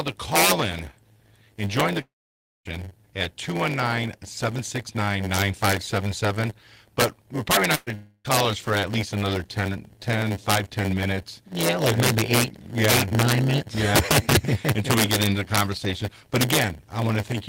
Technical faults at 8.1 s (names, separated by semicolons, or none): integer overflow; block size mismatch (padded); long network dropout